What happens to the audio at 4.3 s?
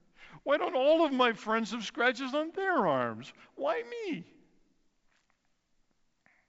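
Nothing goes wrong at 4.3 s: the speech comes through intact there, carried on G.722 wideband telephone coding at 64 kbit/s with content reaching up to about 7.7 kHz.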